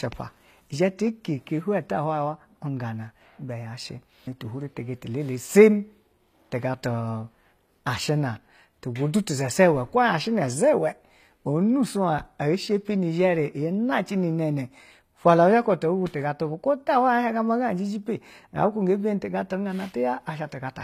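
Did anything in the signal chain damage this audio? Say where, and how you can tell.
Yes, at the codec stage, throughout the speech. The treble stops dead at 14.9 kHz. Sibilants sound gritty and metallic. The likely cause is HE-AAC compression at a low bitrate, around 24 kbps. Band replication rebuilds the top end from copied lower bands, so its harmonics misalign.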